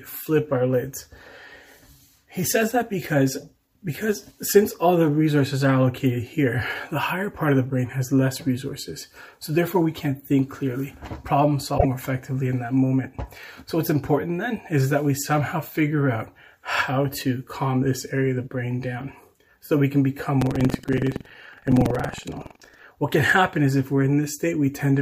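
Two separate problems turn up in this audio. At 11.74 to 11.85 s there's a short blip from damaged data in the compressed stream: a stretch of corrupted bytes throws the decoder off, so it garbles those frames and has to hunt for the next valid frame header to get back in sync. Then from 20.38 to 22.85 s you get a robotic rattle at about 21.5 Hz, which is buffer tearing. The writer and the playback hardware have slipped so they cross inside each period, which fits a 2048-sample buffer. A small slice of every buffer, something like a sixth, replays audio from roughly a tenth of a second earlier, with hard joins on both sides.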